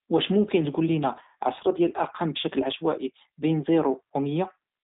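From start to finish the speech has been squeezed through a G.729 codec, which fits an 8 kbit/s narrowband voice link of the G.729A kind. The codec does not send the waveform; it rebuilds each 10 ms stretch from a vocal tract filter, a pitch predictor and a few pulses. The line passes only about 150 Hz to 3.7 kHz, with nothing above 3.8 kHz, so the speech sounds dull and boxed in, and the coarse rebuild leaves a plainly audible rough, synthetic edge.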